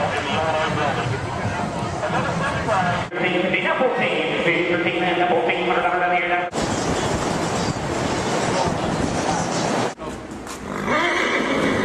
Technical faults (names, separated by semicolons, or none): none